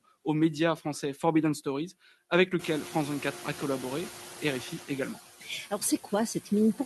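Throughout the speech, the background noise sinks in the pauses and swells back under each phrase. These are noise suppressor artifacts: the processor pulls down bands it judges to be steady noise by about 10 dB, frame by frame.

From 2.59 to 4.73 s, just after the room noise jumps by about 17 dB at around 2.5 s, the noise pours through louder, then gradually settles. This is the noise suppressor catching up: its noise estimate trails the sudden rise, cutting only about 5 dB at first and taking 2.14 s to adapt, all heard within a call path whose audio tops out near 12 kHz.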